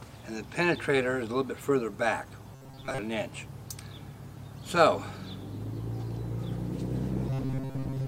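Robotic sound from repeated short buffers turns the audio into a rigid 134 Hz metallic buzz from 2.55 to 2.98 s and again from 7.30 s to the end. This is likely caused by a roughly 7.5 ms chunk being looped in place of most of the real audio. A spectrogram would show evenly spaced harmonic lines at 134 Hz multiples, and the waveform would show identical repeating cycles.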